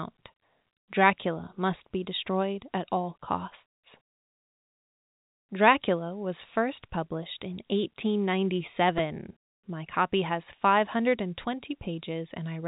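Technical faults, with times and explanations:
8.98 s, repeated buffer: new audio arrived late, so the device replayed one 2.9 ms block four extra times, heard as a brief buzzing click.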